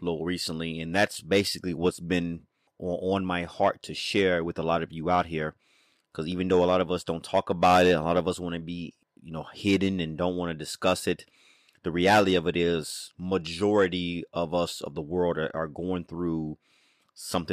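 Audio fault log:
No faults detected.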